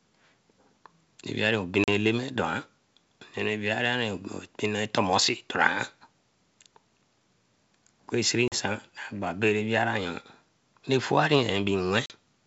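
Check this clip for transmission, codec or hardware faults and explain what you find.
Three short dropouts point to packet loss on an ADPCM call, heard over wideband G.722 coding whose clear top end, reaching toward 7 kHz with faint upper-band hiss, fits the full 64 kbit/s mode.

At 1.84, 8.48 and 12.06 s, about 40 ms of audio, roughly a couple of packets, drops to hard-edged silence. On a spectrogram each gap is a clean vertical blank band, and on the waveform it is a flat line. The decoder's adaptive predictor and step size then lose track of the sender's, so the speech resumes slightly distorted. On the waveform the signal settles within some tens of milliseconds.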